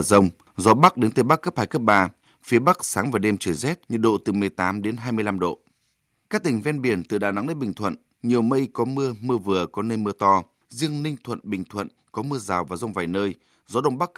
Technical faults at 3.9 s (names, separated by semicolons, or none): none